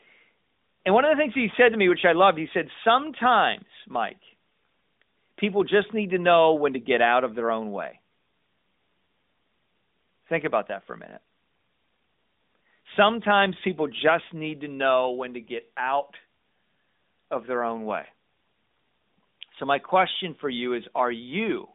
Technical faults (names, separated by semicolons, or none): none